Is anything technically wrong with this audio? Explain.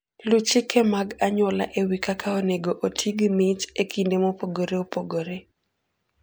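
No, nothing stood out as technically wrong on listening to this speech recording.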